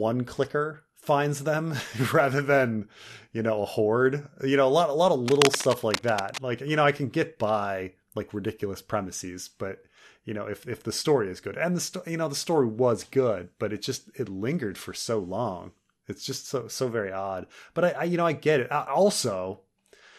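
Cable scratch noise runs from 5.26 to 6.38 s, right after "lot a lot of": dense, uneven crackling rustle sits not far below the speech. It likely comes from a worn cable or connector being moved, its contact resistance fluctuating rapidly.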